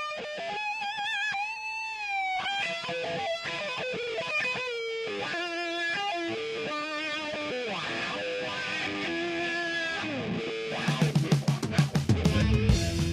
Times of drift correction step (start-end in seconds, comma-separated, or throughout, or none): 1.56-2.48, 11.10-12.05